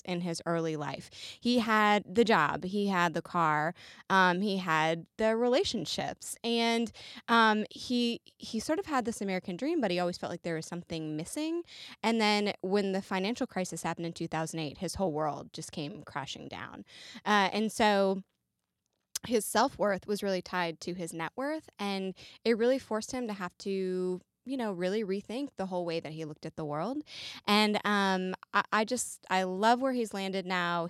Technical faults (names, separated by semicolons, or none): none